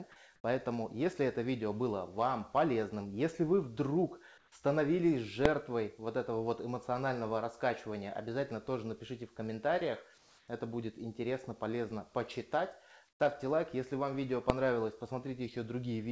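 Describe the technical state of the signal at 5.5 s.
At 5.46 s, invalid numbers at full scale: a calculation blew up, pinning a 0.73 ms block to one extreme value, heard as one sharp bang; the waveform shows a flat spike far beyond the surrounding peaks, the spectrogram a thin vertical stripe.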